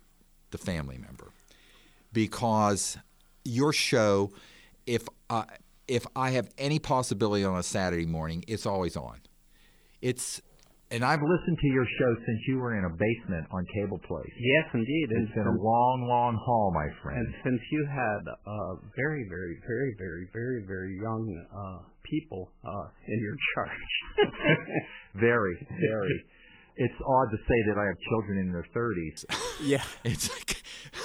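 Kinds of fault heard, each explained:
Adaptive stream at a lower bitrate: a slowed connection made the player switch to a much lower-bitrate version from 11.17 s to 29.17 s. With no gap, the sound abruptly turns dull and artefact-laden with nothing above 3 kHz, which fits a fall from 128 to about 8 kbit/s MP3.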